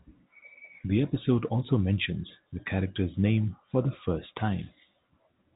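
No technical faults can be heard in the speech; it carries the narrow telephone band of G.711 A-law coding, with nothing above about 3.8 kHz.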